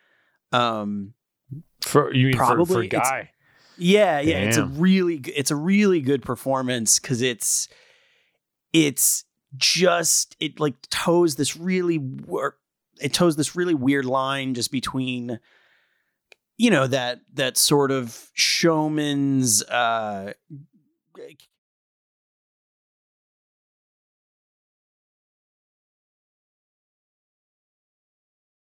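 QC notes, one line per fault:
No faults found; the speech level tapers off in a smooth fade-out from around 20 s to 21.6 s with no click or hard edge.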